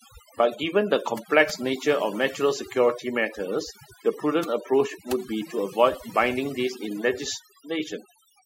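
Speech with overdone noise removal across the whole clip. The noise reduction is set far too hard. Frequency bands close to the estimated noise floor are cut away. The background drops and breaks up into twinkling specks. Quiet voice detail disappears along with it.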